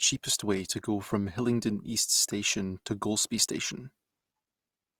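Opus compression runs through the whole clip, most likely from an Opus encoder in its CELT music mode at a low rate, around 24 kbps. The speech keeps its full bandwidth, reaching to about 20.4 kHz, and the encoder preserves each band's energy. With too few bits it fills the detail by folding lower bands upward or injecting noise. The damage is plainly audible: the speech sounds rough and grainy rather than swirling, with hissy, noisy texture replacing clean harmonics.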